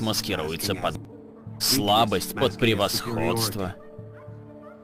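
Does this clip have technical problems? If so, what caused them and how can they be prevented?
Yes, two kinds. There's a skip ahead at about 0.95 to 0.97 s: around a second of audio just vanishes and the two sides are butted together with no fill, so the sound jumps forward. That happens when a chunk is lost in transit or thrown out by an overflowing jitter buffer while newer audio is already queued. To prevent it, size the jitter buffer sensibly and conceal or fade across losses rather than discarding a whole backlog.

Then there are two jitter buffer speed-ups, from 1.05 to 2.10 s at about 108% speed and from 3.35 to 4.27 s at about 109%. Each trims roughly a tenth of a second. The buffer was holding more than its target, so the receiver snipped out short pitch-period slices over and over, and the audio sounds a bit rushed without any pitch change. To prevent it, smooth out the network delivery bursts and let the buffer drain more gradually.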